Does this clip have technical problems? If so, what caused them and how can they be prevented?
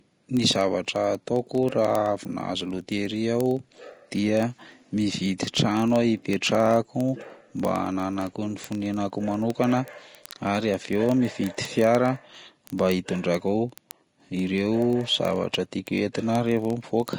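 Yes, there are two.

The whole clip is hissy and grainy, with nothing above about 10.6 kHz, a roughened edge on the tones and smeared consonant attacks. That's likely Vorbis compression at a low setting, something around 35 kbps. The encoder cuts the top off and quantises what's left of the treble so coarsely that fine detail turns into noise of similar energy, which is the grit you hear on the speech. To prevent it, encode at a higher quality setting or keep a lossless copy for anything that gets re-processed.

Word clock ticks run from 0.13 s right through to 17.16 s, sharp little ticks of uneven strength repeating roughly every 30 ms, so hundreds of them across the clip. The receiving device is running on its own clock instead of locking to the sender's digital stream. The two clocks are off by something like 700 ppm, so they keep sliding past each other, and each slip drops or repeats a single sample, giving a tick. 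To prevent it, lock the receiver to the incoming digital signal or to a shared word clock.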